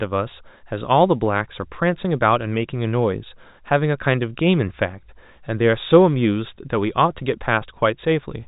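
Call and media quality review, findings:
No faults found; telephone-band speech, nothing above 3.8 kHz.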